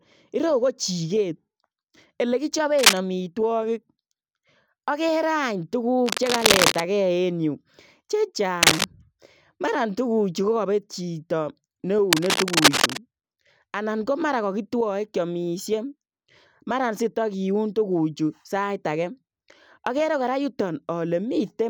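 A worn cable, plug or control being moved is the likely cause of the cable scratch noise in this speech, where unsteady contact resistance injects dense, ragged bursts of scratching and rustling. They land at 2.76 to 2.97 s, 6.06 to 6.81 s, 8.63 to 8.85 s and 12.11 to 12.98 s. Most sit roughly 5 dB above the speech, while the burst near 6 s is about as loud as the speech.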